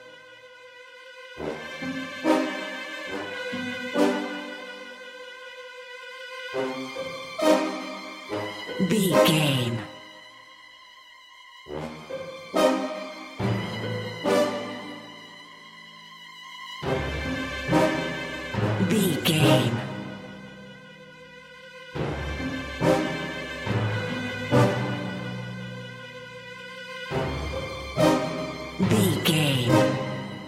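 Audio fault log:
No faults heard.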